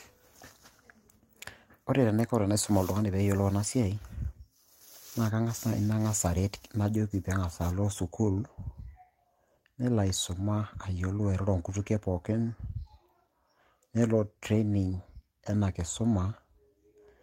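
No technical faults are audible anywhere in this recording.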